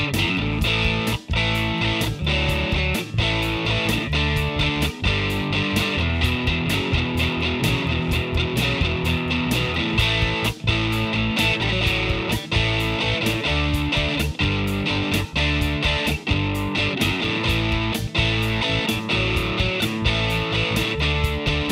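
No technical fault can be heard anywhere in the recording, and the signal stays steady and intact throughout.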